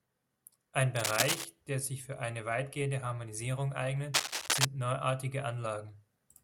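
Bursts of scratchy, rustling noise cover the speech from 0.96 to 1.45 s and from 4.14 to 4.65 s, the second louder; this cable scratch noise likely comes from a worn connector moving.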